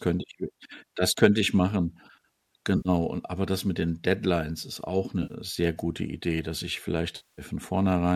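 Speech with AAC frame loss and concealment at 2.77–2.88 s (80 ms), 5.23–5.33 s (70 ms) and 7.16–7.42 s (220 ms). The short gaps become smeared, noisy patches, and the longest fades down and back in. Unlike a hard dropout, the decoder fills the gaps with recycled spectrum, likely from low-delay AAC-ELD with roughly 10 ms frames.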